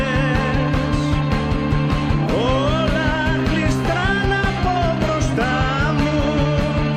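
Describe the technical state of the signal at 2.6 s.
Nothing at 2.6 s points to a fault; the signal there is intact.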